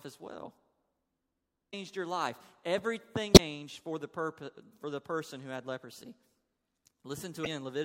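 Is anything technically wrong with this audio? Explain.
Yes, there's damaged data in the compressed stream, hitting this speech three times: 1.69 to 1.74 s, just before "your life"; 3.32 to 3.39 s, just before "for the purpose for"; and 7.43 to 7.47 s. At each spot the decoder hits corrupted frames, loses sync and hunts for the next header, so you get a short chirp, squawk, click or hole.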